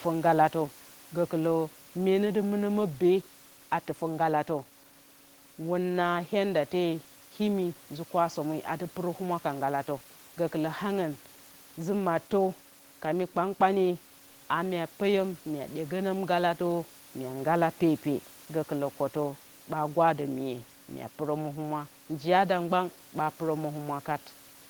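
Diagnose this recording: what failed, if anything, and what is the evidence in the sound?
Nothing in the chain has failed here; the only thing to hear besides the speech is the room's own background noise, sitting about 24 dB below it, and that belongs to the recording rather than to any stage of the system.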